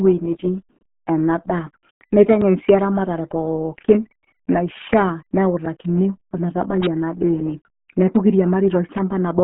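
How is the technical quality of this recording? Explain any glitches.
Quality is poor. RealAudio 14.4 codec damage runs throughout: the speech is squeezed into a very low bitrate, consistent with an 8 kbit/s codec, with nothing above 3.9 kHz, leaving it muffled and gargly.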